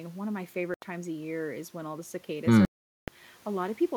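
At 0.74 s the speech cuts to silence for 80 ms, then again from 2.65 to 3.08 s for about 0.43 s. A likely Bluetooth dropout: packets missed the headphones, and the sound resumes further on. Spectrograms show empty, sharp-edged vertical gaps, and waveforms flat lines.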